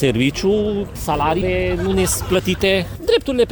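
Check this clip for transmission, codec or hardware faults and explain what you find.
Two transmission faults can be heard: a skip ahead near 1.41 s and a jitter buffer speed-up from 2.36 s to 3.15 s.

At 1.41 s the audio jumps forward. Roughly 0.4 s of sound was discarded, either lost in transit or dropped when the jitter buffer overflowed while later audio was already queued. Nothing fills the hole, so the two sides are spliced almost directly and playback lurches abruptly. On a waveform the envelope changes shape instantly at the splice, and a spectrogram shows harmonic and formant tracks breaking off and resuming at unrelated positions, with no silent column between them.

From 2.36 s to 3.15 s the jitter buffer speed-up plays the sound at about 105% of normal rate while pitch stays unchanged. The buffer held more audio than its target, so the receiver repeatedly cut out short pieces one or a few pitch periods long, removing about 50 ms in total. 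The passage sounds slightly rushed. On a spectrogram the events in that stretch sit closer together in time while harmonic spacing stays constant. The waveform shows small seams where cycles were removed.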